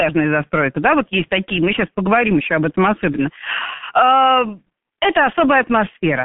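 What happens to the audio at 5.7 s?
At 5.7 s the speech carries the G.723.1 codec sound heard through the whole clip. Nothing reaches above 3.6 kHz, so it sounds muffled. Coarse 30 ms frames and a slow voice model leave it hoarse with smeared consonants, which fits a bitrate near 6 kbit/s.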